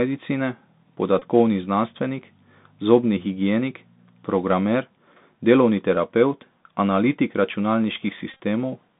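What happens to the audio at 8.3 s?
Around 8.31 to 8.36 s the sound breaks into a short, rough buzz pitched near 267 Hz. This is a Bluetooth headset packet repeat: voice packets between headset and phone went missing, and the chip filled each gap by decoding the previous packet's bits again. Since each packet lasts 3.75 ms, back-to-back copies form that 267 Hz buzz. About 67.5 ms of sound was lost in total, spread across roughly 90 ms, with the longest unbroken stretch around 30 ms.

Under the buzz the audio has the boxy, narrowband sound of the Bluetooth CVSD headset codec, confined to about 150 Hz to 3.7 kHz. CVSD codes each sample as a single up-or-down bit at 64 kHz with an adaptive step. Here that leaves a plainly audible granular hiss and scratchy, distorted high sounds where the step cannot keep pace.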